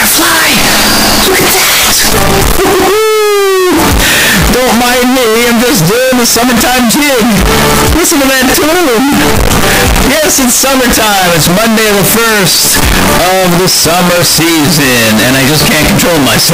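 Harsh, very loud distortion runs through the whole clip, with quiet passages as loud as the rest, likely signed and unsigned mixed up, consistent with 16-bit samples read with the top bit flipped.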